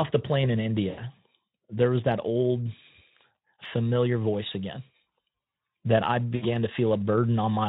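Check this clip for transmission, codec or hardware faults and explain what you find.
Two short dropouts point to VoIP packet loss concealed by the speech codec, at 0.89 to 1.01 s and 6.36 to 6.48 s. About 80 ms and 60 ms of audio went missing, which fits several lost 20 ms frames. The Speex decoder filled each gap by extrapolating its last pitch and filter while lowering gain, so the speech smears into a buzzy tone or coloured noise that fades and stays weak briefly after packets resume. The Speex coding itself does only light damage elsewhere.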